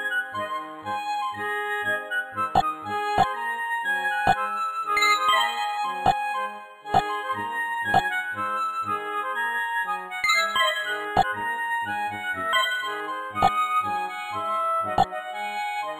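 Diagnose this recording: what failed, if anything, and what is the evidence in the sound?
At 12.53 s the sound jumps abruptly ahead with a brief blip, a network or streaming fault that is likely a stream segment skipped: one segment failed to load and playback resumed at the next. A waveform shows a hard discontinuity there, and a spectrogram shows a thin vertical click line.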